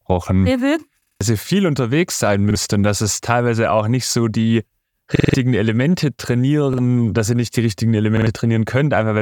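Short stutters at 1.02, 2.51, 5.16, 6.73 and 8.17 s replay one 46 ms slice with hard joins: four extra times at 1.02 and 5.16 s, twice at 8.17 s, once elsewhere. This is a repeated buffer. Audio arrived late, so the device replayed its last block, which fits a 2048-sample buffer.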